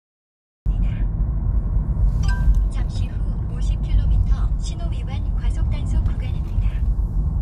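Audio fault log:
0.00–0.66 s, cut-off start: the clip holds digital silence until 0.66 s, then the sound enters already in progress, with no attack or fade-in. Capture began late, so the onset of the sound was never recorded.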